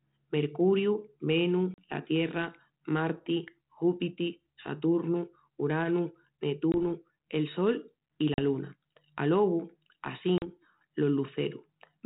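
Hard-edged silent holes at 1.74, 6.72 (just before "el sol i"), 8.34 (just after "el sol i") and 10.38 s, 20 to 40 ms each, with speech briefly returning unsettled. This is packet loss on an ADPCM call: roughly one or two lost packets push the 32 kbit/s G.726 decoder's predictor and step size out of step.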